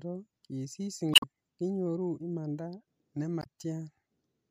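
At 1.11 to 1.24 s, just before "kinyoru imanda", and again at 3.39 to 3.46 s, the speech breaks into a short chirp, squawk, click or hole. That's damaged data in a compressed stream: corrupted bytes make the decoder misread frames and lose sync until it finds the next header.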